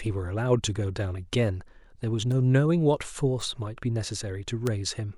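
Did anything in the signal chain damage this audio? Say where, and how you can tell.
Yes: bit error spikes at 2.32, 3.41 and 4.67 s, sharp broadband ticks up to about -14 dBFS, each a flipped bit in storage or a digital link.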